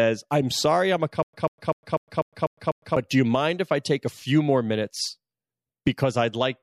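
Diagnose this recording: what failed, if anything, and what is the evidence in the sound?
The likely culprit is a stalled playback or streaming buffer: each time it retried, it replayed the last fragment it held and then ran dry. From 1.23 s to 2.97 s the speech turns into a stutter with silent gaps. A 142 ms burst repeats seven times, each followed by about 106 ms of dead digital silence, on a steady 248 ms cycle. Whatever should have played during that span never arrives and is lost.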